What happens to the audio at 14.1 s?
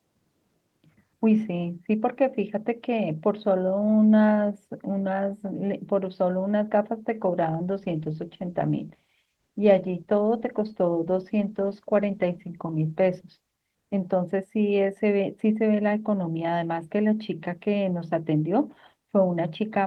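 At 14.1 s the speech is still inside a call bitrate drop running from 7.4 to 14.55 s. The encoder's budget fell from 48 to 18 kbps, and the lowest rate held about 5.1 s, so the speech sounds coarse and watery throughout instead of in brief packet-loss gaps.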